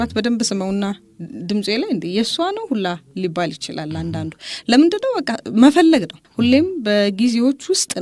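Nothing stood out as a technical problem on listening to this audio.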